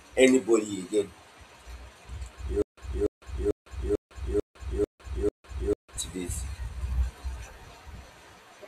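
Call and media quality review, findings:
Stutter with silent gaps, 2.62–5.97 s, speech resumes at "to this". A 290 ms fragment replays seven times, 155 ms digital silence between, 445 ms period. Likely player or stream stall re-issuing its last buffer on each retry; intervening audio lost.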